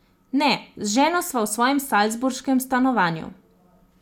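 A short speech recording with no technical fault to point to. Nothing in the audio calls for a time, a value or a cause.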